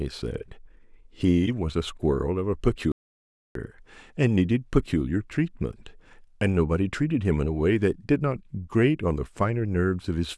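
Speech, with one audio dropout to silence from 2.92 to 3.55 s: the sound cuts off mid-flow and roughly 0.63 s goes completely dead, not even room tone, before picking up again. Likely the input was lost briefly while the recorder kept writing silence.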